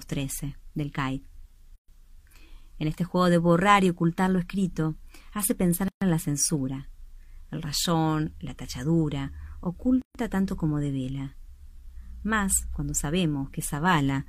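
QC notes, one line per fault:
1.76–1.88 s, 5.88–6.02 s, 10.02–10.15 s: gap at a join of encoded pieces, repeating every 4.0 s. Silences of 126.9 ms, 133.2 ms and 133.2 ms cut into continuous sound, then it resumes where it stopped. Separately encoded segments were butted together with their start-up delay and last-frame padding left in. The waveform shows flat dropouts with smeared edges. The spectrogram shows full-band blank columns whose borders are smeared by the codec.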